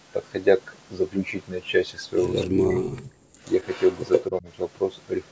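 A speech recording with a call's microphone processing, nothing above 8 kHz, carrying echo leak at 2.39–2.8 s, 2.98–3.12 s and 3.44–4.24 s: a delayed copy of the voice, first about 258 ms behind and later about 124 ms, sitting roughly 10 to 20 dB below the direct speech. The likely cause is a far-end loudspeaker echo the canceller failed to remove. Speech suppressed in double talk appears at 2.48–2.99 s and 4.3–4.47 s, where the voice dips by roughly 25 dB and then 15 dB, likely because the canceller attenuated everything while both sides talked. Background gated by the echo canceller at 3.27–3.4 s drops the room sound by about 23 dB for roughly 150 ms before it returns.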